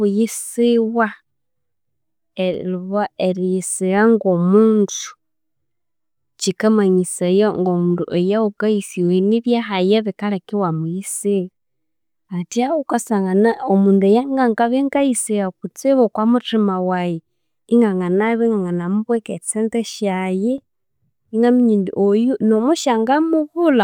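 A brief click or stutter recurs every 3 s, at 2.54, 5.55, 8.56, 11.56, 14.57, 17.58 (just before "inganganabya inganganamubweka") and 20.58 s. These are overlapping chunks: each 3 s chunk starts 6.5 ms before the previous one ended, so that sliver of speech plays twice at every join.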